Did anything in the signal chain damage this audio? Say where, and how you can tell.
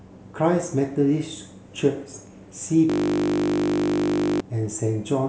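Yes. From 2.90 to 4.40 s the speech is replaced by a steady 50 Hz buzz as one 20 ms slice repeats about 75 times. This is a system hang loop at the driver or buffer stage: the host stalled while the hardware kept replaying its ring buffer.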